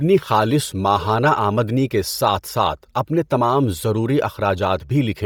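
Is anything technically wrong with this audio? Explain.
Yes. Throughout the speech, the upper spectrum sounds breathy and grainy rather than absent, which is likely Bluetooth LC3 compression. At a rate fitting about 32 kbps, heavy quantisation in 10 ms transform frames zeroes upper bands and refills them with noise. Content still reaches about 20.2 kHz, so this is noise substitution, not a low-pass cut.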